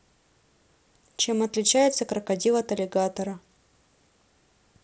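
Nothing's actually wrong here: it's just speech coming through a Bluetooth mSBC headset link, with the usual wideband headset character and no technical faults to point to.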